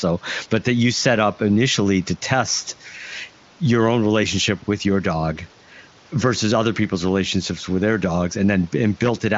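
Nothing goes wrong anywhere in this speech; it just carries the narrow-topped sound of an AMR wideband (HD Voice) call, with nothing up past about 7.6 kHz and little to no codec roughness, which points to one of the higher AMR-WB rates, around 23.05 kbit/s.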